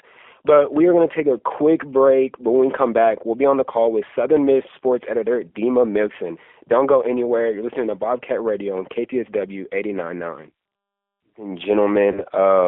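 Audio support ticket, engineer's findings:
G.729 codec throughout: band limited to roughly 300 Hz to 3.5 kHz, plainly rough, synthetic texture from pulse-based excitation. Fits an 8 kbit/s G.729A voice path.

VoIP packet loss concealed by the speech codec, 12.12 to 12.24 s: about 30 ms of audio gone, consistent with a single lost packet. The decoder extrapolates into a fading fill, and the speech stays weak until the frames recover.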